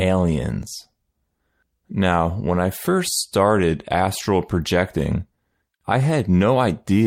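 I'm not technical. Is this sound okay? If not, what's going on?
Yes, nothing is wrong with this recording, so you can relax.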